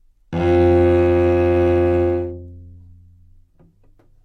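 Just a short stretch of sounds, and nothing in it stands out as a technical problem worth flagging.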